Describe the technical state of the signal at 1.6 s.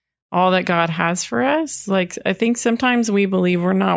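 At 1.6 s the speech signal is intact, with no dropout, clipping, distortion, glitch or other technical fault audible at that point.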